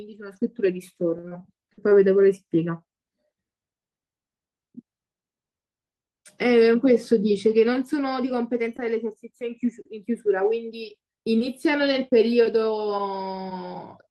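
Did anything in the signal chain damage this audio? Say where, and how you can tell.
Yes, repeated packet loss (robotic sound) at the network stage, 1.17 to 1.93 s: six holes, up to 58 ms, concealed by repeating previous sound. On a spectrogram these show as frozen, smeared harmonic blocks.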